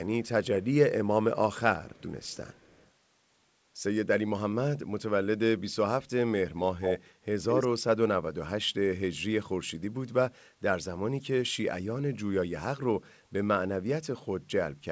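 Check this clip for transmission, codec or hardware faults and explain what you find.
The clip has one fault, an echo leak, heard five times. The sound is band-limited at 8 kHz, which fits a wideband call codec.

Echo leak at 0.24–0.29, 1.93–2.03, 2.22–2.9, 6.81–7.07 and 7.49–7.68 s: a delayed copy of the speech returns, likely from a loudspeaker the echo canceller didn't fully suppress. The first three trail by 246 ms and are very faint. The last two trail by 213 ms and are nearly as loud as the speech. On a spectrogram they appear as repeated harmonic patterns shifted right. In the waveform they show as a duplicated envelope.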